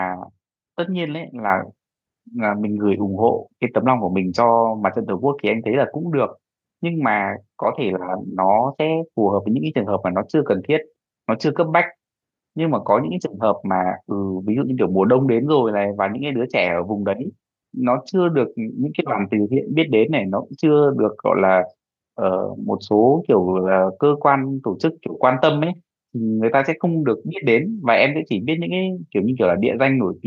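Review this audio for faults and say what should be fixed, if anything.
At 1.5 s the microphone volume steps up: the whole speech signal, voice and background together, jumps by about 6 dB in a single step and stays at the new level. This is the call software judging the input too quiet and raising the device's input volume at once rather than gradually. On the waveform the envelope widens abruptly at 1.5 s, and on a spectrogram every band, including the noise floor between phrases, brightens at the same vertical line. To prevent it, disable automatic microphone gain control in the call software and set the input level manually before recording.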